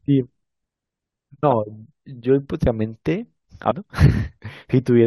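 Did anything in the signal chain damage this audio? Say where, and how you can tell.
Yes, compressed frames were skipped at the codec or storage stage, at 2.65 s and 3.70 s. Each time the speech jumps ahead by about ten 21.3 ms frames, roughly a fifth of a second. On a spectrogram, harmonic contours break off abruptly.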